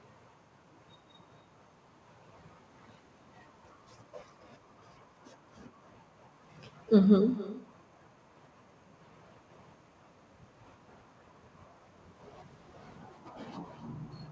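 It's a speech recording with echo that has no canceller running the whole way through. Every phrase gets shadowed about a third of a second later by a thinner copy roughly 17 dB down. That's the far end's loudspeaker feeding back into its own mic, with nothing removing it before it comes back to you. The top end stops at 8 kHz, which fits a wideband call codec like G.722.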